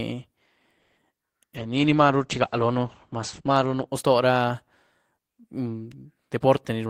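Right at 0.79 s there's a call audio freeze running to about 0.99 s. The last bit of speech gets stretched into a fading buzzy tail for roughly 180 ms, most likely because packets got held up and the jitter buffer ran dry, leaving the receiver to improvise. When the audio comes back it carries on where it left off. Nothing's lost, but everything after lands about 180 ms later.

From 1.57 s to 3.93 s you get a call bitrate drop. The voice goes rough and watery and loses its top end, as the bandwidth estimate fell and the encoder was pushed from 32 kbps down to 11 kbps. At that rate the audio bandwidth shrinks from 20 kHz to 8 kHz, which is where the muffled quality comes from. It sits at the lowest rate for about 2.3 s before things recover.

Near the end, 6.37 s to 6.86 s, there's a jitter buffer speed-up. The buffer was holding more audio than it wanted, so the receiver trimmed out lots of tiny pitch-period-sized slices to catch up, about 70 ms in total. 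The speech plays at 112% speed with the pitch unchanged, so it comes across as hurried and rushed rather than higher-pitched.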